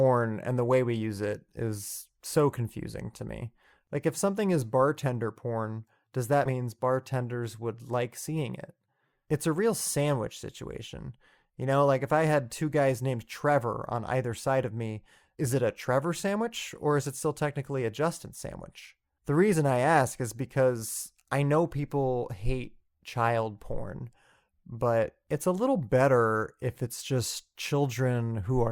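At about 6.45 to 6.51 s the speech suddenly jumps forward, with a short blip right at the join where one stretch of audio gives way to a later one. That's the sort of thing you get from a stream segment skipped: most likely one chunk of the segmented stream never arrived, so the player just carried on with the next chunk it had. The missing piece is gone entirely, which is why the sound lurches ahead instead of pausing.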